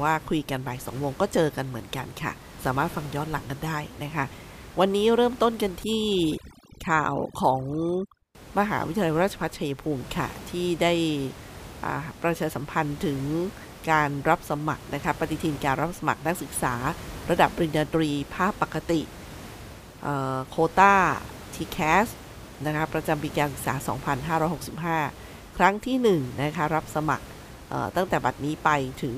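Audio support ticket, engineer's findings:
Overdone noise removal, 5.84–8.35 s: speech over near-silent, twinkling floor. Denoiser gating bands near its noise estimate; spectrogram shows scattered specks on black, where elsewhere room noise sits about 17 dB below speech.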